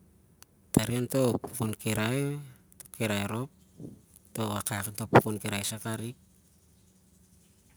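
From start to finish the speech carries crude rate conversion. The sample rate was raised by a small ratio, and the gaps were filled by repeating the nearest existing sample instead of filtering. The repeated samples fall in a fixed cycle, which fits a change from 44.1 kHz to 48 kHz. That cycle adds tones unrelated to the voice. It is heard as a gritty, inharmonic fizz riding on louder and brighter sounds, roughly 20 dB below the speech.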